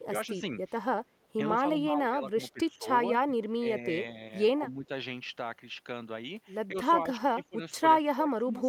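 The speech drops in level five times: 0.08 to 0.34 s, 1.62 to 2.88 s, 3.27 to 3.64 s, 4.58 to 4.9 s, and from 6.71 s to the end. In the first four, only part of each span is affected, about 100, 700, 200 and 300 ms. The deepest cuts are around 10 to 15 dB. The cause is likely speech suppressed in double talk. The echo canceller mistakes the talker for loudspeaker echo while the far side speaks. It then turns both down.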